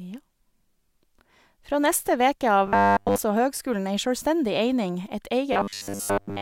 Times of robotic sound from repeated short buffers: 2.67-3.19, 5.53-6.41

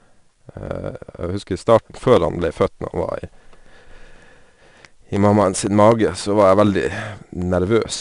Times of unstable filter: none

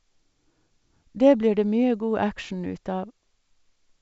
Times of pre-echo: none

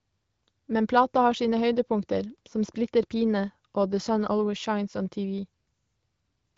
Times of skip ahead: none

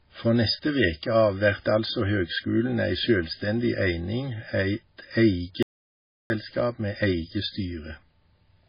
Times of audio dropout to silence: 5.63-6.30

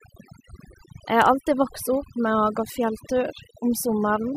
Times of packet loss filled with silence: none

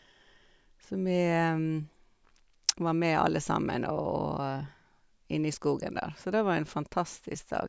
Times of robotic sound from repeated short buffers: none

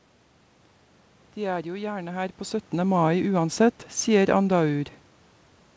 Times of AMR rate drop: none

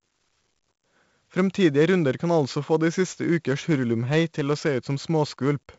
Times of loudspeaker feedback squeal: none

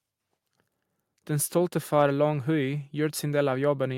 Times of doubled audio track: none

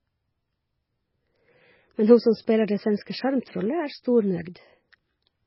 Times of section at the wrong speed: none

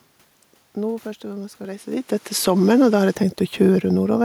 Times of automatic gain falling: 2.31-2.69

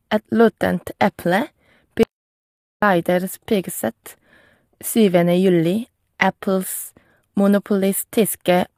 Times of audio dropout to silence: 2.03-2.82

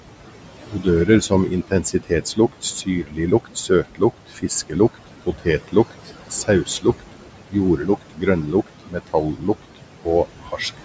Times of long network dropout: none

